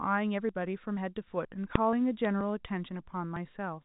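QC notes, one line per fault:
0.49, 0.97, 1.45, 1.93, 2.41 and 3.36 s, audio missing between chunks: the pattern points to a recorder or processor that likely works in half-second chunks and drops a short piece, around 20 ms, each time it closes one chunk and opens the next. The two sides are butted together with no silence, so each spot is heard as a small jump in the speech, a sudden skip forward at the half-second rhythm.
1.76 s, invalid numbers at full scale: a calculation in the chain produced infinite or invalid values for a block of about 1.3 ms, which fits a 32-sample block. Those values were forced to the largest positive or negative value, so the output sits flat at one extreme, far beyond the speech peaks, for that instant. Because the block is so short, the start and end merge, and it is heard as a single loud bang over the speech.
2.25 s, bit errors on a digital phone line: a few bits were flipped in transit on the G.711 mu-law link, at a very low error rate, and each flipped bit corrupts one sample. 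Where the error lands on the sign or a high-order bit, that sample swings far from its neighbours, giving a sharp tick or brief crackle lasting a couple of milliseconds. The surrounding speech, band-limited below 4 kHz as the telephone coding requires, carries on unchanged.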